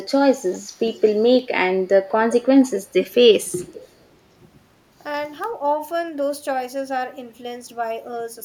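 Faint delayed copies of the speech surface from 0.52 to 1.08 s, 2.65 to 2.8 s, 3.04 to 3.14 s and 3.72 to 3.88 s, each trailing the original by about 0.31 s and sitting roughly 15 to 25 dB below it. This echo leak is likely a far-end echo canceller letting loudspeaker pickup slip back. Unlike room reverberation, which smears continuously, these are brief, distinct scraps that appear and vanish.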